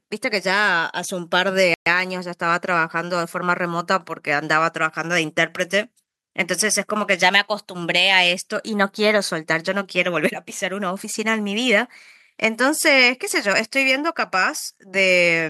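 Speech clip with one Bluetooth stall: at 1.74 s the sound drops to silence for about 120 ms, then resumes at 1.86 s, likely from interference draining the headphones' buffer.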